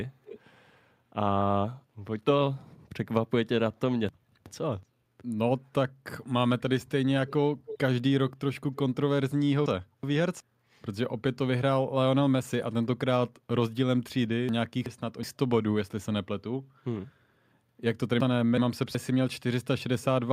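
A loudspeaker on the far end, with an echo canceller likely failing to remove it, leaks an echo leak back into the line at 0.25 to 0.4 s: a faint copy of the speech about 310 ms late, roughly 20 dB below it. At 4.09 to 4.83 s, chunks out of order appear: a 0.37 s block arrived one chunk late and plays after its successor, so the speech jumbles briefly across three hard joins. The echo leak returns at 7.27 to 7.32 s, 7.66 to 7.78 s (louder, around 10 dB down) and 8.75 to 8.79 s, as scraps at the same delay. The chunks out of order recur at 9.66 to 10.40 s, 14.49 to 15.23 s and 18.20 to 18.95 s, and a last faint echo leak comes at 20.01 to 20.05 s.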